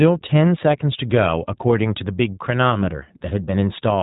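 Speech passed through the iLBC codec for its full length: each short frame, consistent with 20 ms coding, is coded on its own, leaving audible roughness, a synthetic edge and nothing above 3.8 kHz.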